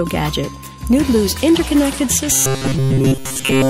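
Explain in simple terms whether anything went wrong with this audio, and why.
From 2.32 s to the end, the sound turns into a rigid, metallic 133 Hz buzz: robotic sound from repeated short buffers, likely from a chunk of about 7.5 ms replayed over and over.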